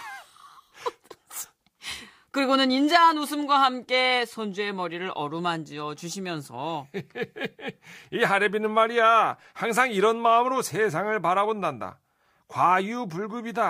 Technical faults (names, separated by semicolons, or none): none